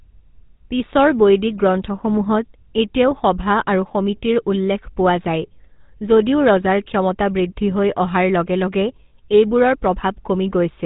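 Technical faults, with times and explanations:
Throughout, GSM full-rate codec: plainly audible buzzy, gravelly roughness from pulse-excited vocal-tract coding, consistent with 13 kbps; the spectrogram shows nothing above 4 kHz.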